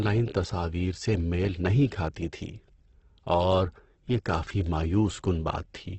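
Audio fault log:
throughout: Opus compression, heavy, likely from its CELT music mode at a rate that fits about 12 kbps. The speech stops at 8.2 kHz and sounds rough and grainy, because starved bands are filled with folded or noise energy instead of MP3's swirling spectral holes.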